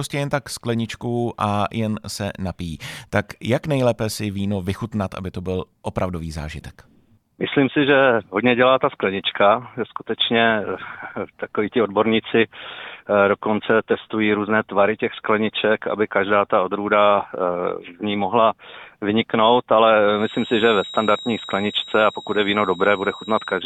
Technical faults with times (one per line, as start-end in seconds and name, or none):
20.11-23.66 feedback whistle